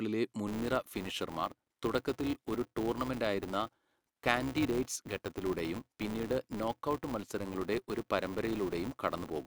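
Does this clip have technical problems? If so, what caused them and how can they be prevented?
Yes. From 0.47 s to the end at 9.46 s, a steady 200 Hz buzz rides under the speech and swells with its level. This is a filter restarted on every block: it loses its state and starts each block from silence, so every block opens with a small transient. That points to blocks of about 5 ms. Carrying the filter's state across block boundaries prevents it.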